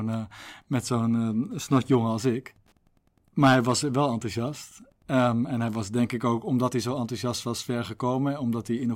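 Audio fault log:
throughout Wi-Fi interference: ticks every 102.4 ms, about 40 dB under the speech, from a rectified nearby radio beacon; spectrogram shows evenly spaced vertical lines.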